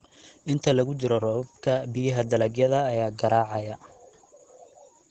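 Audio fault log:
Throughout: Opus voice compression, plainly audible. Nothing sits above about 8.9 kHz; the speech sounds hoarse and faintly robotic because SILK mode at a rate that fits 12 kbps models the voice through linear prediction with coarsely coded excitation, in 20 ms frames.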